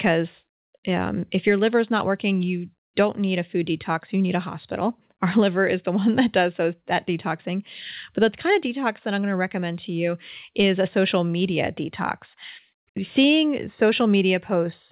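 The speech carries no audible technical faults.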